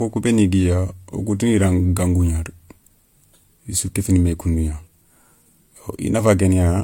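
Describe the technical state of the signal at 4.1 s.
At 4.1 s, as throughout, there is transcoding between lossy codecs, likely MP3 re-encoded as HE-AAC. Both codecs' artefacts are heard together, and nothing is above 18.4 kHz.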